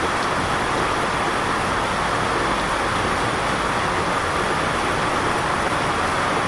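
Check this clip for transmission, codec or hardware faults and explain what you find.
No faults detected here.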